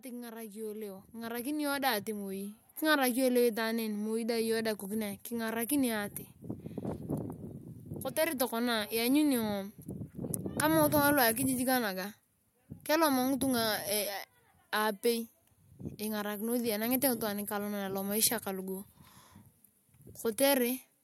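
From 0.05 s to 5.6 s there's automatic gain rising: the AGC decided the input was too quiet and kept pushing its gain up, about 13 dB in all. The speech and the room noise behind it swell together, steadily louder over those five and a half seconds.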